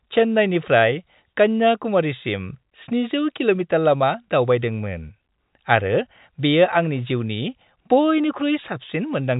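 No technical faults can be heard in the speech; it has passed through G.711 mu-law telephone coding at 64 kbps, so nothing sounds above about 3.8 kHz, and the coding has left at most faint traces.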